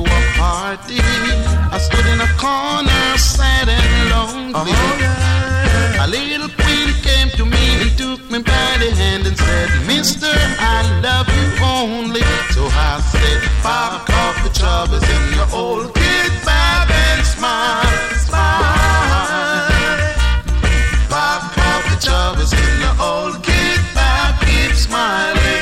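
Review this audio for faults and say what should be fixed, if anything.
No faults found; nothing needs fixing.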